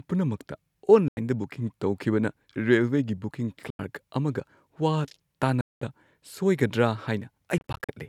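Speech that drops abruptly to silence four times: gaps of about 90 ms at 1.08 s and 3.70 s, about 200 ms at 5.61 s, and a scatter of brief holes from 7.58 to 7.89 s, each resuming further on. A Bluetooth dropout, with packets late to the headphones, is the likely cause.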